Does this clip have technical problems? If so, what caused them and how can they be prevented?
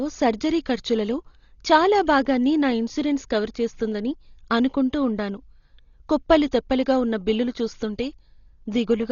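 Yes. Throughout the speech, nothing reaches above 7 kHz and the damage is heavy, likely from Dolby Digital compression at a very low bitrate, around 32 kbps. Bands given no mantissa bits are filled with dither noise, so the sound is rough and fluttering rather than watery. Prevent it by encoding at a higher bitrate.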